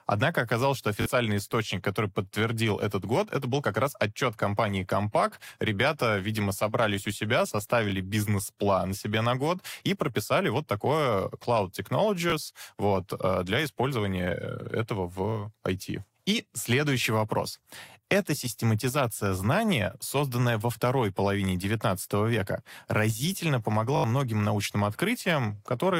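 Repeated buffer faults occur at 1.02–1.06 s, 7.90–7.92 s, 12.30–12.32 s and 23.96–24.04 s. Fresh audio arrived late, so the device replayed its last block, which fits a 20 ms buffer. The speech stutters briefly with a hard join at each repeat, and the final event, with its four repeats, is the longest.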